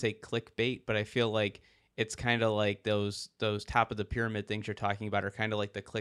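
No technical faults can be heard anywhere in this speech recording.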